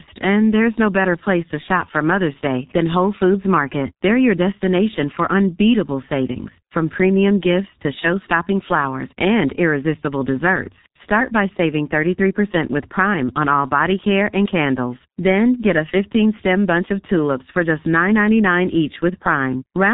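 Speech runs through a G.723.1 codec for the whole clip, pointing to roughly 6.3 kbit/s. Nothing passes above 3.8 kHz. Heavy coding damage leaves it muffled, hoarse and smeared.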